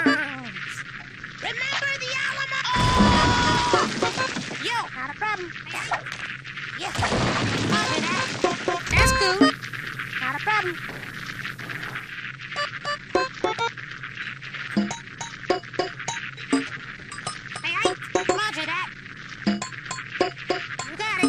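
At 2.88 s there is a brief scramble, ending by 2.92 s. This is chunks out of order: a 20 ms block of audio was delivered one chunk late, so it plays after the block that should follow it. Swapping the two creates three hard joins within 40 ms. Unlike a dropout, nothing is missing and no gap or silence appears. The material is all present, only jumbled.

From 8.47 s to 12.27 s the sound shifts to a hissier, changed character. This is digital radio blending to analogue: the receiver lost its digital stream and faded over about 0.35 s to the station's FM broadcast, then faded back at the end. A steady hiss sits roughly 35 dB below the signal, and the level moves by about 4 dB across each blend. Those gradual crossfades at both ends mark it apart from a codec switch or hard dropout.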